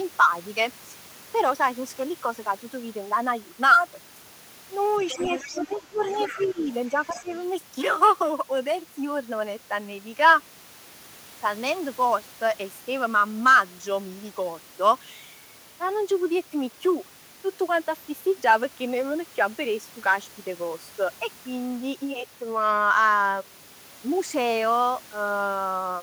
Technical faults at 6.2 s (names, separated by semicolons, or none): other side's voice leaking through; speech suppressed in double talk